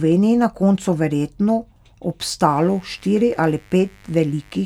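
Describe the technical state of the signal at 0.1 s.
At 0.1 s the speech signal is intact, with no fault present at that moment.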